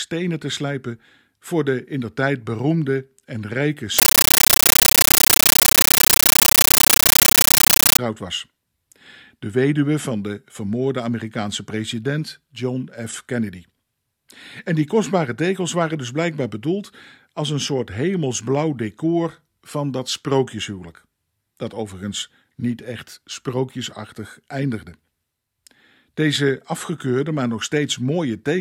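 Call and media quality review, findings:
Compressed stream played as audio, 3.99–7.99 s: chattering static instead of speech, 13.3 ms noise bursts 31.25 times a second. Fits an undecoded AC-3 stream passed through as samples.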